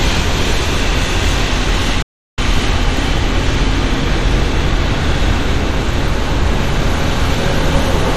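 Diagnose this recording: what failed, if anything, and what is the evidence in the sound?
Dull, gurgling, granular texture throughout, with nothing above 14.8 kHz. This is likely MP2 compression at a low bitrate, starving and switching off the upper sub-bands.

The sound cuts out from 2.02 to 2.38 s, about 355 ms of silence, then resumes. This is likely a playback stall: the player's buffer ran dry and output halted until data returned.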